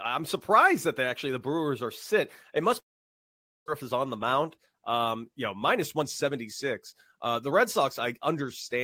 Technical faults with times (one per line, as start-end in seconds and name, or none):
2.79-3.70 long network dropout
4.25-4.74 jitter buffer speed-up
5.54-8.42 jitter buffer speed-up